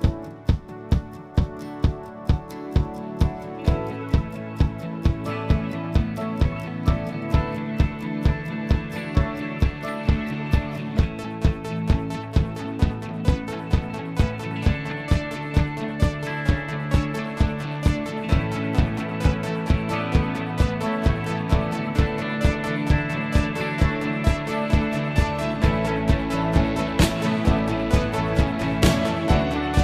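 No technical faults can be heard anywhere in this audio.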